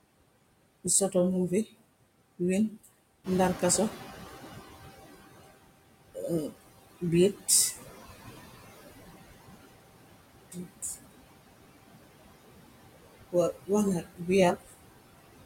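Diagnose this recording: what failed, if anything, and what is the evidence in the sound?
Throughout the speech, the background noise sinks between phrases and swells back up underneath them. These are noise suppressor artifacts from the call-processing stage. A spectral suppressor is pulling down, frame by frame, every band it judges to be steady noise, by about 20 dB, and its gain jumps around as speech comes and goes.

Around 3 s the room noise steps up by about 10 dB. From 3.24 to 5.27 s that louder noise comes through with less reduction at first and only gradually settles back down. This is the noise suppressor catching up, again in call processing. Its noise estimate lagged the sudden rise and took about 2 s to adapt before reapplying roughly 18 dB of reduction. The room noise itself is part of the recording, not a system fault.

Three short stretches of speech sound swallowed or faint: at 10.51 to 10.66 s (down about 12 dB), at 14.0 to 14.29 s (down about 20 dB), and at 14.56 to 14.74 s (down about 16 dB). 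Each lasts a fifth of a second or less. This is speech cut by the noise suppressor, a call-processing fault in which low-level speech energy is mistaken for noise and attenuated along with the background.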